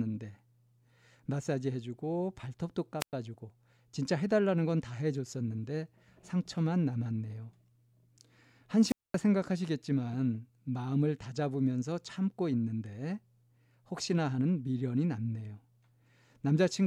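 Speech with two wireless microphone squelch dropouts at 3.00 to 3.13 s and 8.86 to 9.17 s. A brief hiss precedes muted gaps of about 105 ms and 224 ms. These show as flat waveform gaps and blank spectrogram columns where the fading radio link tripped the receiver's squelch.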